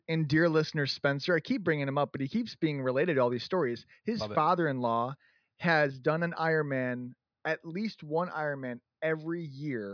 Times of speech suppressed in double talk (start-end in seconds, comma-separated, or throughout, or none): none